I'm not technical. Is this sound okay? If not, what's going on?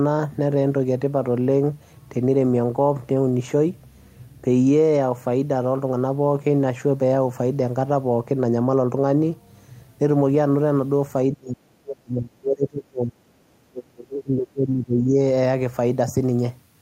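No. Toward the end, the voice sinks and nearly vanishes twice, from 11.35 to 13.15 seconds and again from 13.69 to 15.16 seconds, each time for a second or two before coming back. This is speech suppressed in double talk. The likely cause is that the other side spoke at the same moment, and the echo-removal system mistook this talker for leaked loudspeaker sound and muted them along with it.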